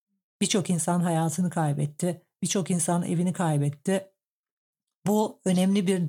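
At 3.37 s, just after "insan evini", a single sharp tick cuts through the speech, broadband and unrelated to it, peaking at about -28 dBFS. This is a bit error spike: a flipped bit briefly threw a sample or two off by a power of two before returning.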